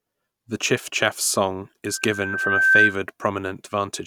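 Right after "chiffchaff's song", at 1.86 s, a loudspeaker feedback squeal starts: the microphone-to-speaker loop exceeds unity gain at 1.6 kHz, so that tone swells over roughly a second to about 10 dB above the speech before stopping at 2.97 s. A spectrogram shows one brightening horizontal line; the waveform envelope grows steadily.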